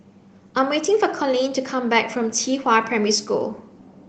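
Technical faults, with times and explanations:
No technical faults can be heard in this speech recording.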